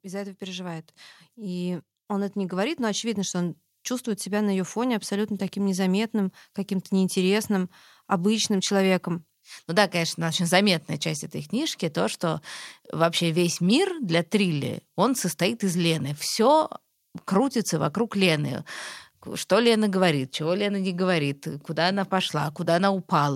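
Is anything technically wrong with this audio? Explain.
Yes. From 0.05 to 5.39 s, speech and background swell together by about 9 dB until "таким незаметным". This is automatic gain rising: the gain control judged the input too quiet and raised it gradually.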